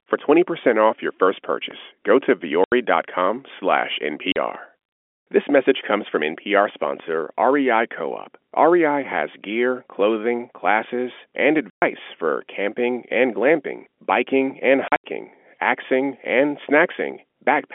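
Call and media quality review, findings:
DC step at 1.71, 4.55 and 7.00 s: low thump under continuing speech. Waveform baseline jumps, then drifts back, consistent with a 2 Hz high-pass bleeding off the offset. Spectrogram shows a brief broadband click at each step. Probable component: converter or input offset switching.

Packet loss filled with silence at 2.64–2.72 s (80 ms), 4.32–4.36 s (40 ms), 11.70–11.82 s (120 ms), and 14.88–15.04 s (120 ms total, scattered, longest run 80 ms). Speech chopped with hard-edged holes. Hole lengths fit 20 ms packets. Waveform shows flat silent gaps; spectrogram shows blank vertical bands across the 250–3400 Hz telephone band of the G.711 path.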